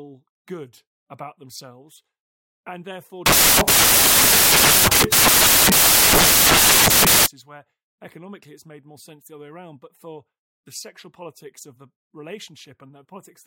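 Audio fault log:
3.26–7.26 s, samples built from the wrong bytes. After "and therefore", the speech gives way to loud broadband noise for 4.0 s. The speech returns at "where economically it's made". The reader assembled each sample from its bytes incorrectly. It was off by one byte, read them in swapped order, or assumed the wrong alignment. The rapidly changing low bits became the most significant part of every value. The result sounds like noise instead of the original waveform.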